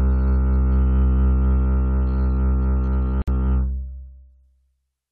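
A music clip with one fault. At 3.22 s the sound drops into silence until 3.28 s, a gap of 57 ms. Its edges are smeared by the codec. The music then resumes where it stopped. This is a gap at a join of encoded pieces. Separately encoded sections were spliced untrimmed, keeping encoder start delay and end-frame padding.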